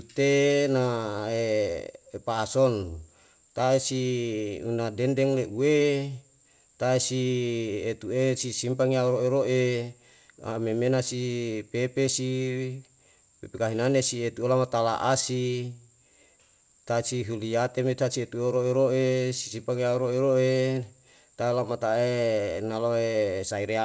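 No faults found; the speech has nothing above 8 kHz, which fits a wideband call codec such as G.722 on the WebRTC call path, and nothing else in the sound stands out.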